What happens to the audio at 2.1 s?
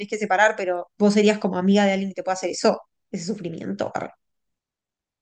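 Nothing goes wrong at 2.1 s; the audio plays through that moment intact, with no dropout, click or distortion.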